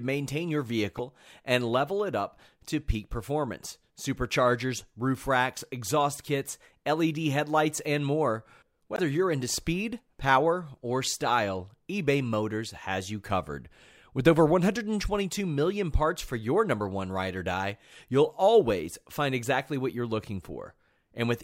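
At 0.96 to 1.00 s, between "maintain your" and "and level it up", and again at 8.95 to 8.99 s, between "headlights and more" and "you're into speed power", the speech is hit by damaged data in a compressed stream. Corrupted bytes leave the decoder unable to parse those frames, so it drops sync and hunts for the next valid header. Each event is a brief glitch of about 40 ms.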